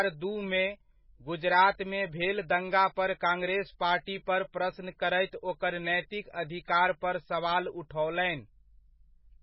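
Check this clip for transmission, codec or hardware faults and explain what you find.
One fault runs through the whole speech clip. Throughout, it sounds watery and swirly with nothing above 5.5 kHz, likely heavy MP3 compression, starving weak frequency lines, consistent with roughly 16 kbps.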